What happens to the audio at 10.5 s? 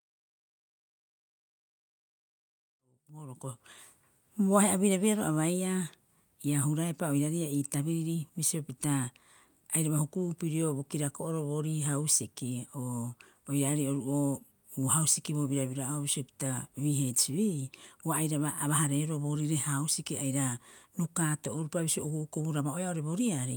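At 10.5 s the speech carries on intact, with no dropout, click, level jump or other fault.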